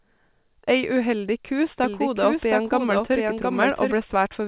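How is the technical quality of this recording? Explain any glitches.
The recording has one clear glitch, a doubled audio track, heard through a narrowband call path where nothing gets above 4 kHz, consistent with G.711 mu-law at 64 kbps. Right after "uheldig ku", at 1.84 s, a second copy of the speech cuts in abruptly, lagging about 0.7 s behind and around 5 dB quieter, and runs until it drops out just as suddenly at 3.94 s. It's dry and full-band, no decay or room sound, so it isn't an echo. The likely cause is the audio being picked up a second time via a slower route, or an edit leaving two copies out of step.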